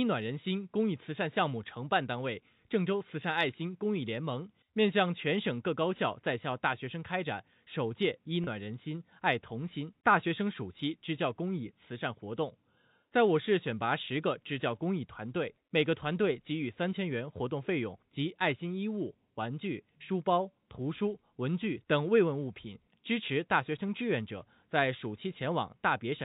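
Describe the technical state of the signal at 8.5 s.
At 8.5 s the signal is just coming out of a packet loss with pitch repetition, spanning 8.44 to 8.47 s. About 30 ms of audio went missing, consistent with three 10 ms packets, and the receiver filled the gap by looping the last pitch period. It sounds like a brief, slightly buzzy held tone. On a spectrogram the harmonic stripes freeze flat for that instant. The waveform shows identical repeated cycles, bandlimited below 4 kHz by the G.711 coding.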